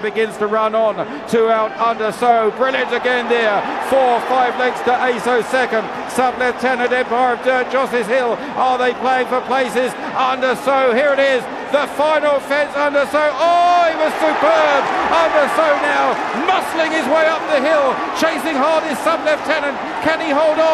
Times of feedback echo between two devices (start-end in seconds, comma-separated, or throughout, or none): none